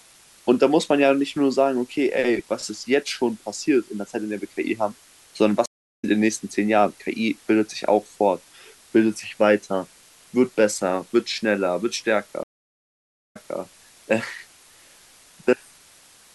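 Throughout the speech, low bit depth with dither: an 8-bit signal with dither gives a steady, even hiss roughly 30 dB below the speech, without distortion. At 5.66 s a stream reconnect drops 347 ms to silence, then a fresh decoder resumes near 6.05 s, skipping roughly a fifth of a second. A second reconnect at 12.43 s brings 893 ms of silence, and the audio resumes by 13.58 s, 261 ms earlier, repeating a short stretch.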